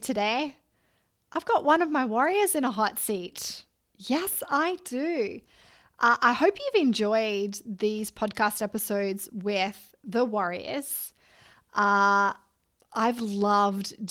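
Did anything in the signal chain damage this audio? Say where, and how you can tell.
No, no stage in the chain damaged this speech, and the Opus voice coding at 24 kbps in hybrid mode still carries content up to about 20.4 kHz.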